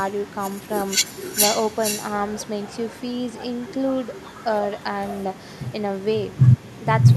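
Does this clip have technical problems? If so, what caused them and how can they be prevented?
Yes. Echo with no canceller runs throughout this speech: each phrase returns roughly half a second later, about 17 dB quieter and thinner, because the far end's loudspeaker feeds its microphone and the signal travels back uncancelled. Prevent it by enabling acoustic echo cancellation or using headphones at the far end.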